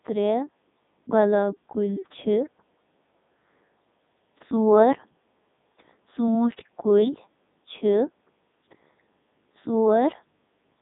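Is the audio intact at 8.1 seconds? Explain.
No. At 8.1 s, as throughout, the speech has heavy Codec 2 vocoder damage, consistent with its 3.2 kbit/s mode: resynthesised from pitch and envelope, sounding robotic and buzzy, with nothing above 3.8 kHz.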